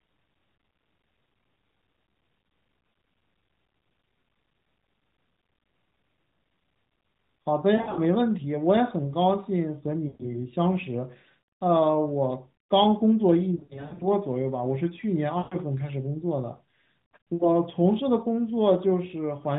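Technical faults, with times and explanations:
7.76 to 7.99 s, 10.08 to 10.32 s, 13.56 to 14.08 s, 15.38 to 15.57 s, 17.34 to 17.56 s: lost AMR speech frames. Corrupted frames forced the 12.2 kbps narrowband decoder to repeat the last pitch and vocal-tract settings at falling gain, so speech smears, warbles and dips for 60 to 260 ms, in broken bursts at 7.76 and 13.56 s.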